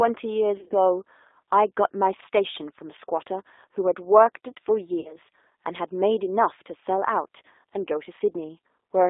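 Throughout, the speech carries plainly audible G.729 codec damage: a narrow 300 Hz to 3.7 kHz telephone band with a rough, slightly synthetic edge at about 8 kbit/s, because the decoder rebuilds each short frame from a filter, pitch predictor and sparse pulses. Plain band-limiting would sound muffled but not rough.

From 0.57 to 0.75 s, VoIP packet loss concealed by the speech codec breaks up the sound in scattered bursts. The longest continuous gap is 50 ms. At 5.00 to 5.15 s a 50 ms loss occurs. Each gap is filled with a stretched, fading buzzy tone or coloured noise from the decoder's last pitch and filter, rather than silence or a click, and the sound stays weak briefly after the packets return.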